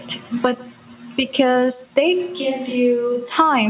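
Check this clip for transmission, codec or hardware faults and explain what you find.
Two faults are audible in this speech. The call path's G.711-style band limit at 4 kHz is also audible.

Throughout, there is echo with no canceller. The far end's loudspeaker leaks into its microphone. A thin copy returns about 150 ms later, at about -24 dB.

From 2.26 to 3.36 s, the sound switches to a distant microphone. The close microphone likely dropped out. The speech turns hollow and roomy, a few dB quieter, with faint background noise.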